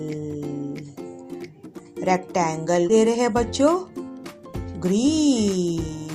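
At 2.89 s a skip ahead occurs: about a second of audio was discarded while later audio was already queued, so playback leaps forward with no gap filling it. The sound on either side of the cut is butted together almost directly.

From 2.99 s to 6.06 s a jitter buffer speed-up follows. The receiver, holding more audio than it aims for, trims short pitch-period pieces repeatedly, running about 8% fast and removing roughly 0.3 s. The sound seems hurried while its pitch stays unchanged.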